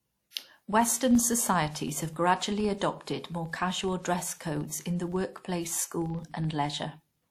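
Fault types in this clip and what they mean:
Filter restarted on every block: the filter loses its internal state at each block boundary and starts from silence, so every block opens with a small transient. In this speech it forms a steady buzz at 23.4 Hz throughout, which fits a 2048-sample block, and it follows the speech level. Unlike buffer underrun clicks, which are irregular and leave gaps, these ticks are perfectly periodic and nothing is missing.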